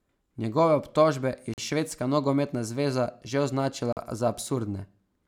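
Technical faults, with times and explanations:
1.54–1.58 s and 3.93–3.97 s, blocks of digital silence: the speech drops out for about 43 ms each time, cutting out and back with no fade. The first comes after "obtožbe je" and the second after "švedska nogometna zveza že". The output buffer likely went unfilled and was zeroed, which fits a 2048-sample buffer.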